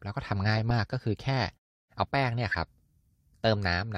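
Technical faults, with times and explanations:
0.70 s and 2.49–2.55 s, corrupt frame decoded: a brief glitch at 0.70 s and a longer one over a few frames at 2.49–2.55 s, both around -20 dBFS at their peak. Damaged bits in the compressed frames were decoded anyway, so misread gains and codes put energy at the wrong frequencies. The signal is replaced by misplaced energy for about the length of each damaged frame.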